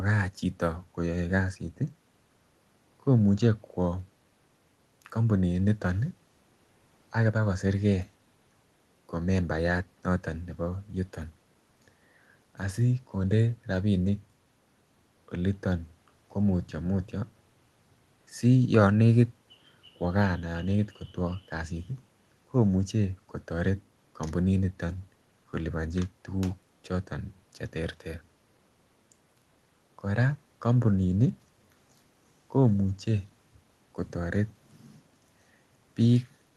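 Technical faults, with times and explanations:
No technical faults, with no times and no explanations to give; the speech reaches the listener over a WebRTC call path, where the Opus coding keeps the band to about 12 kHz as expected.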